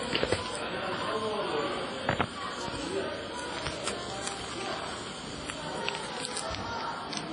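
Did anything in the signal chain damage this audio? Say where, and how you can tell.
Yes, at the codec stage, and it runs the whole clip: nothing above 10.3 kHz, plus a ringing, washy smear with hiss pumping along with the signal. That's likely WMA compression, heavy damage fitting roughly 24 kbps, where long transform blocks spread quantisation noise and zero weak detail.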